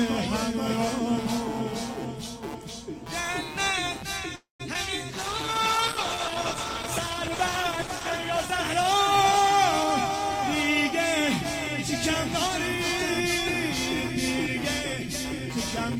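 Computer activity noise runs through the whole clip: a buzzing, scratching pulse repeating around 150 times a second, sitting roughly 15 dB below the sound. Processor, graphics or mouse load disturbs the audio circuit's shared ground, so the noise follows the computer's activity rather than the sound.

A call audio freeze occupies 4.35 to 4.62 s. The last sound is stretched into a fading buzz or hiss that dies into about 150 ms of silence, and a 241 ms gap is inserted before the audio resumes where it stopped, with nothing lost. The likely cause is delayed packets leaving the jitter buffer empty.

Short concealed packet loss follows at 4.74 to 4.76 s. About 40 ms of audio never reached the decoder. The receiver covered only 10 ms by continuing the preceding sound, then blended back in, leaving a brief smear where a sliver has vanished.

A call bitrate drop runs from 5.11 to 9.71 s. The encoder falls from 48 to 12 kbps and stays at its lowest for 3 s, so the sound turns coarse and watery and the high frequencies are cut away, giving a muffled quality until the rate recovers.

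A jitter buffer speed-up follows from 9.81 to 11.0 s. The buffer held too much audio, so the receiver repeatedly removed short pitch-period pieces, about 150 ms in total. Playback runs at 110% speed with unchanged pitch and sounds hurried.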